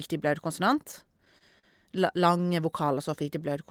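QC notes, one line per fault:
0.91–1.66 s, repeated stalls (stutter): Over this span the stream hitches seven times as packets arrive late and the jitter buffer keeps running dry. Each time the receiver holds the last sound going until the next audio turns up. In total about 117 ms is filled this way, with the longest hold about 44 ms, roughly a sixth of the span. Nothing is skipped, so unlike packet loss the sound is all there. It just stops and restarts.
2.85–3.67 s, jitter buffer slow-down: Here the buffer is rebuilding its reserve by repeating single pitch periods and small slices of pause over and over. That stretches the passage by about 70 ms, so it plays at roughly 92% speed. Pitch stays where it was, which sets it apart from a resampling or clock error. The stretching draws sounds out rather than breaking into the stop-start hitches heard earlier.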